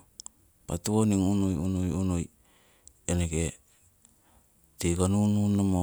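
Nothing is technically wrong with this speech recording.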